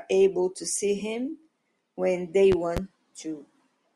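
At 2.52 s a loud pop lands as two sharp thumps within 0.28 s, roughly 10 dB above the speech: a voltage pulse, likely from a switch, plug or static, added to the signal. Unlike a dropout, the speech continues underneath.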